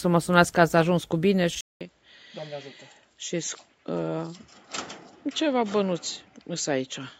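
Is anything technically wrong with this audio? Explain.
Yes. At 1.61 s the sound cuts to silence for 200 ms, then continues to the end duller and a few decibels quieter, with a faint new noise floor, likely an input switched to a poorer device. A spectrogram shows everything above 7.6 kHz vanishing there, and the waveform shows a gap and smaller peaks.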